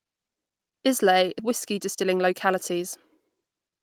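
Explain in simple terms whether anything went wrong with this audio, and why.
Yes, there's a skip ahead at about 1.39 to 1.41 s. Roughly 0.7 seconds of speech just vanishes, and playback jumps straight forward with no gap, so the audio before and after is stitched together almost directly.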